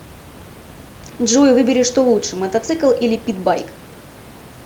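No technical faults are audible in the speech; the steady room noise beneath it sits about 21 dB down and belongs to the recording space, not the system.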